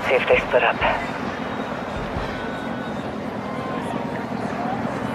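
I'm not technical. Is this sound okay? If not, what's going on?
Yes, this sound is okay, with no faults to hear. Nothing stands out, so there's nothing here you need to fix.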